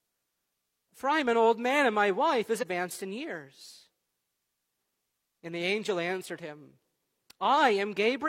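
Damaged data in a compressed stream hits this speech clip from 2.58 to 2.64 s, a burst of roughly 60 ms. Part of the encoded stream there is corrupt, so the decoder cannot read those frames properly and loses its lock on the frame structure. While it hunts for the next valid frame header, what comes out is a short, harsh chirp or blip cutting across the speech before normal decoding resumes.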